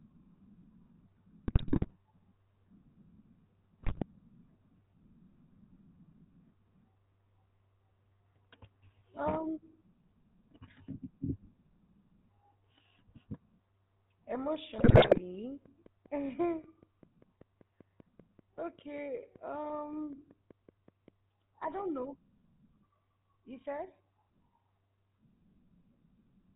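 From start to finish the speech has a buzzy, gravelly roughness and nothing above 4 kHz, the sound of the GSM full-rate codec. It models the vocal tract and excites it with sparse regular pulses, which fits 13 kbps, and the damage is plainly audible.

At 1.48 to 1.93 s, 3.82 to 4.03 s and 14.78 to 15.2 s the speech breaks into squawks, pops and gargling. These are GSM bit errors: corrupted filter, pitch and gain values distort each frame, at error rates of a few percent.

From 15.66 to 21.09 s a regular ticking at about 5.2 clicks per second runs over the sound, pauses included, about thirty clicks in all, roughly as loud as the speech, ending before "I don't know". This train of clicks is likely interference or a faulty connection or power supply.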